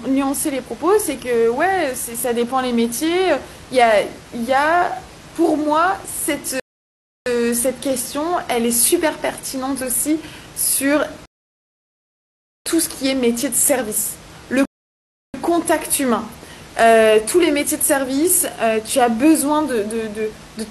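Three rebuffering stalls interrupt the speech. At 6.60 s the audio drops to silence for about 0.66 s, then picks up again at exactly the point it left off, with nothing skipped. A longer gap follows at 11.26 s, lasting 1.40 s, and a third at 14.65 s runs 0.69 s. In each case playback exhausted its downloaded data and waited for more to arrive, so the content stays intact but the clip is stretched by those pauses. The room noise, sitting about 22 dB below the speech, vanishes along with everything else during each stall.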